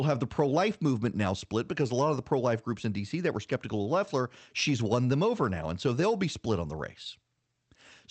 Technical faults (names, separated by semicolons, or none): none